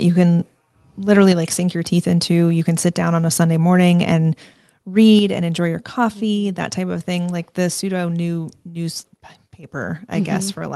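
At 1.32 s, between "you can literally" and "like sink your teeth", the speech and its background drop together by about 4 dB in one step. At 5.19 s, just before "and enjoy your coffee", a second drop of about 5 dB follows. Both are a microphone volume stepped down, likely by call software lowering the input volume. On a waveform the envelope shrinks abruptly at each point. On a spectrogram every band darkens at once, with no change in spectral shape.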